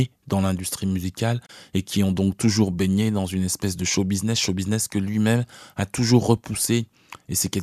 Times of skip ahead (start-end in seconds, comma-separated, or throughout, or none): none